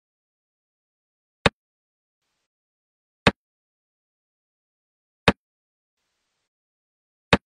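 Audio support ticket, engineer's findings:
Hurried sound at normal pitch, 1.30–1.90 s. Time-compressed catch-up after a stall: player trimming backlog by cutting and cross-fading small pieces, running about 1.5x.

Smeared, noisy, phasey patches at 2.20–2.45 s (0.26 s) and 5.95–6.46 s (0.51 s). AAC frame loss with concealment: decoder rebuilding missing frames from the last good spectrum. Lengths fit roughly six and twelve lost frames.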